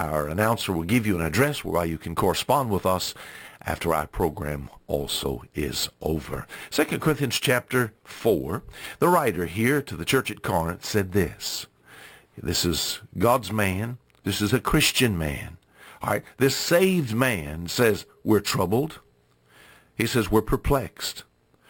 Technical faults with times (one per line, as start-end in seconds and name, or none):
0.00-21.70 imaging from sample-and-hold upsampling